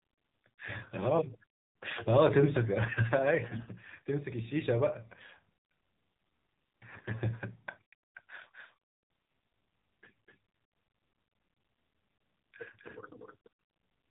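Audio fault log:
throughout: AMR narrowband mobile codec. The speech sounds boxy and muffled, with nothing above 4 kHz, and has a buzzy, synthetic edge typical of a low-rate mobile call. The narrowband codec samples at 8 kHz and rebuilds the voice from a vocal-tract model excited by only a few pulses per 5 ms subframe. The degree of buzziness fits a low mode around 7.4 kbps, where too few bits remain to render the voice naturally.
3.48–3.71 s, 6.90–7.15 s, 12.84–12.95 s: AMR bit errors. In each burst the voice keeps roughly its pitch and loudness but turns hoarse, scratchy and gargly. The last burst is briefer and rougher than the first two. Bits flipped on the link and slipped past the frame checks, so the excitation pulses land in wrong positions and the finer pitch, gain and spectral values are skewed. The lengths fit a run of about a dozen 20 ms frames in the first two bursts and about five in the last.
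8.41 s to the end: doubled audio track. From 8.41 s a second copy of the speech sits behind the first, starting abruptly, lagging by about 300 ms and about 5 dB quieter. It has the full band of the original and no reverberant tail or room colour, which rules out an acoustic echo. The likely cause is the same signal being mixed in twice, either through a second, slower capture path or an edit that left two misaligned copies.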